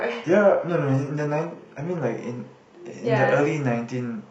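Over the first 2.0 s the speech is dull and smeared, its treble thin and synthetic, then clears suddenly, with no gap. This is an adaptive stream starting at a low bitrate; it fits HE-AAC near 16 kbit/s, stepping up to AAC-LC at 96 kbit/s.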